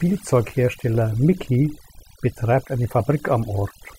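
From start to finish, the background between phrases drops to an unnatural near-silence broken by twinkling, warbling specks. This is overdone noise removal: a noise reduction stage set far too aggressively kept pulling individual frequency bands down or cutting them entirely whenever they sat close to its noise estimate, stripping away the quieter parts of the speech along with the noise.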